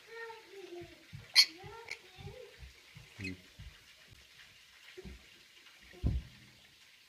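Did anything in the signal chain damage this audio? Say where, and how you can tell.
Yes, at the driver or buffer stage. There's a block of digital silence at 1.89 s and again at 4.13 s, each about 11.6 ms long, which fits a 512-sample buffer. Both are too short to register as gaps, so each comes across as a tick or dip. Either the output buffer wasn't filled in time or a calculation produced invalid values.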